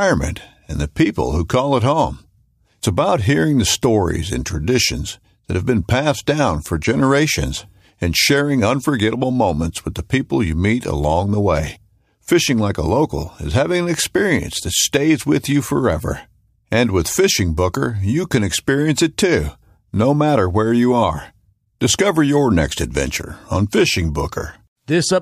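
Nothing in this speech recording stands out as a technical fault anywhere along its length, so there's nothing here to flag.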